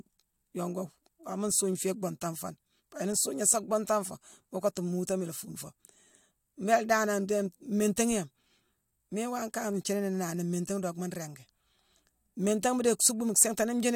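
Nothing in the signal points to a technical fault at any point in the recording.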